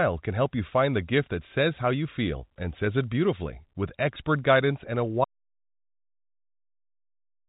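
Speech carried over a G.711 telephone path, with nothing above about 3.8 kHz, loses its audio input at 5.24 s: an audio dropout to silence, most likely from a disconnected source, a broken link or an accidental mute while the recording carried on writing silence. The sound stops abruptly in mid-flow and is replaced by silence, with no room tone or line hiss, lasting through to the end of the clip. Whatever was spoken after that point is gone.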